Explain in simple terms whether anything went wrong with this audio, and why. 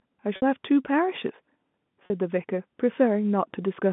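Two short dropouts are audible, at 0.36 s and 2.06 s. Both are packet loss with pitch repetition: pieces of the audio went missing in transit, and the receiver filled each gap by repeating the last small cycle of sound it had received. The first gap is about 60 ms and the second about 40 ms, so each comes across as a brief held, slightly buzzy sound before normal playback resumes. The narrow telephone-style sound comes from the G.711 line coding.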